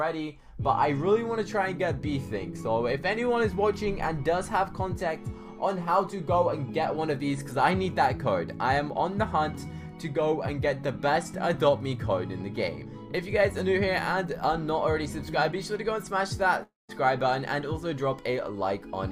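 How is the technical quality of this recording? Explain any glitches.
One glitch stands out. From 16.63 to 16.90 s there is a long network dropout. About a quarter-second of audio is missing: the last sound smears into a fading buzz, then about 160 ms of near-silence. The likely cause is a stalled stream whose receiver padded the gap. Unlike a brief packet loss, the gap is long enough to go silent, and the sound resumes later without the lost part.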